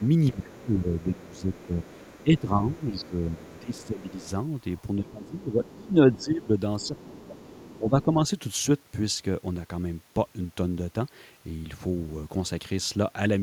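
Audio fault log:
0.00–0.35 s, 0.98–2.40 s, 2.73–4.27 s, 4.78–5.75 s, 6.81–8.03 s, other side's voice leaking through: a faint second voice sits under the main talker. The likely cause is an echo canceller that did not fully remove the far end's loudspeaker signal from the microphone. The scrap at the very start is roughly 30 dB below the speech, and the later stretches are roughly 25 dB below.
0.00–4.31 s, 5.00–8.17 s, speech suppressed in double talk: the main talker's level dips by as much as about 15 dB in places, for roughly 3 s in total in the first span and roughly 2 s in the second. Both spans coincide with the leaking far-end voice. This is likely the echo canceller failing to tell its own talker from the loudspeaker echo while both were active, then turning everything down together.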